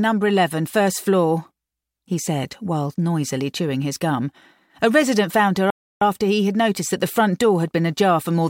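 The audio falls silent from 5.70 to 6.02 s, a 0.31 s playback stall, likely caused by the player running short of buffered data.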